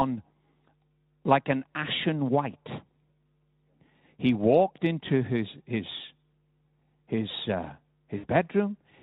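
Near the end of the speech, from 8.17 to 8.27 s, a VoIP packet loss concealed by the speech codec cuts in. About 60 ms of audio went missing, which fits three lost 20 ms frames, and the Speex decoder filled the gap by repeating its last pitch and spectral envelope at falling gain. This produces a brief buzzy, smeared tone that fades out. On a spectrogram, the harmonics flatten into steady horizontal lines that dim across the gap, and the waveform shows repetitive periodic cycles shrinking in amplitude before normal detail returns.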